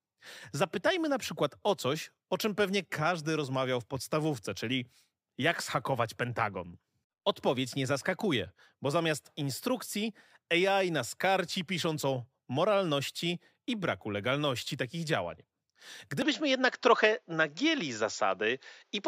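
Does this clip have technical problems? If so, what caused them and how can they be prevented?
Yes. From 16.22 s to the end, the speech suddenly turns duller, with nothing above 7.3 kHz. The level shifts slightly and a faint new noise floor appears, with no gap. This is likely an input switched to a poorer device. Lock the recording input before starting.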